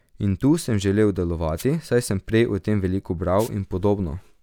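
At 1.56 s, a short burst of static cuts across the speech, lasting about 80 ms. This is a wireless microphone noise hit. The FM radio link faded briefly, and receiver hiss rose over the signal. A second hit, slightly longer, follows from 3.38 to 3.49 s.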